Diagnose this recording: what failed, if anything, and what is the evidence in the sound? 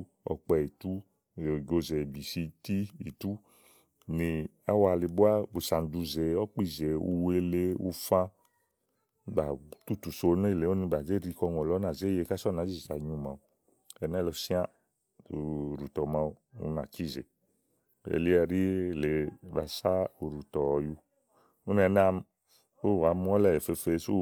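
Nothing failed; no fault is audible in this speech recording.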